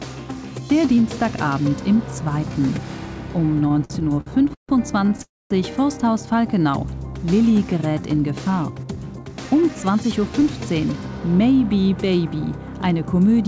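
Carried over a call path whose band ends at 8 kHz, which fits G.722 at 64 kbps, the audio suffers three delivery faults. From 3.64 to 4.71 s there are repeated stalls (stutter): packets kept arriving late or slower than playback, so the jitter buffer ran dry fifteen times. Each time the receiver extended the last sound to bridge the wait, adding 382 ms in total, with the longest stall 146 ms. About 36% of that stretch is filled-in sound rather than new audio, so it drags and stutters, though nothing is lost. At 5.23 to 5.52 s a call audio freeze follows, likely caused by packets held up in transit emptying the buffer again. The last sound is continued for 278 ms, most of it, 230 ms, fading to silence before the audio resumes exactly where it stopped. A gap is inserted and the delay grows by the same 278 ms. Between 8.70 and 10.34 s a jitter buffer speed-up sets in. With more audio queued than the target, the receiver cut many short pitch-period-sized slices to shed around a fifth of a second of delay. 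That passage plays at about 113% speed with unchanged pitch, so it sounds noticeably hurried.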